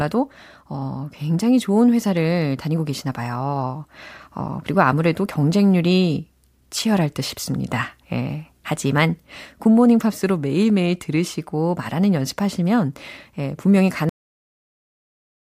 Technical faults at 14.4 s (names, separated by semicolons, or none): cut-off end